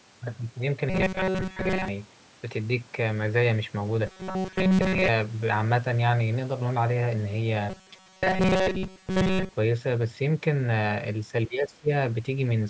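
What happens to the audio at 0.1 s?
Nothing goes wrong at 0.1 s; the speech there is intact, with only the ordinary call microphone processing shaping it: its high-pass filter trims the lowest bass.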